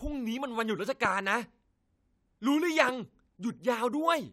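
At 1.05 to 1.07 s, and again at 2.89 to 2.91 s, a single loud pop cuts through the speech, each rising roughly 10 dB above the surrounding level. Each is a brief voltage transient, most likely from a switch, connector contact or static discharge, added straight onto the signal and shaped by the downstream circuitry. It is heard as a sharp thump lasting about 20 ms, with the speech continuing underneath.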